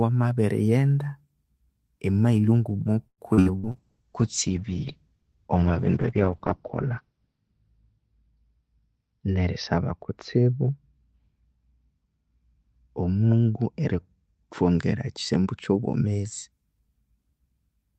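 From 3.07 to 3.77 s, just after "emailo nguma", repeated packet loss (robotic sound) sets in. Packets kept failing to arrive, and each hole was bridged by stretching the previous sound. Five gaps, the longest 106 ms, leave roughly a third of that stretch synthetic and choppy, with pieces missing.

At 3.73 s a call bitrate drop begins and lasts until 16.58 s. The bandwidth estimate collapsed and the encoder was starved of bits, which fits a fall from 32 to 8 kbps. Coarser coding makes the speech rough and watery. The top end is cut from 20 kHz to 6 kHz, muffling it, most heavily for about 3.6 s.

From 8.60 to 9.92 s, a jitter buffer speed-up occurs. The buffer had built up excess delay, so the receiver repeatedly cut out small pitch-period slices, about a tenth of a second in all. The speech runs at 106% speed without changing pitch, sounding slightly hurried.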